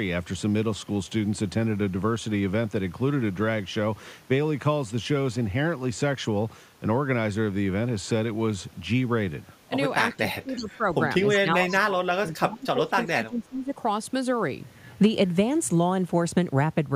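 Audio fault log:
10.10–10.16 s, 10.57–10.71 s, 11.55–11.76 s: echo leak. Brief, faint copies of the speech return 368 ms late, about 20 dB below it, then about 15 dB at the last. This is likely residual loudspeaker pickup that escaped the echo canceller. A spectrogram shows weak, delayed duplicates of earlier harmonic patterns.
10.17–10.86 s, 11.36–13.73 s: speech suppressed in double talk. The speech dips by up to about 20 dB. The likely cause is the canceller ducking the near talker while the far end speaks. The waveform envelope sags in chunks.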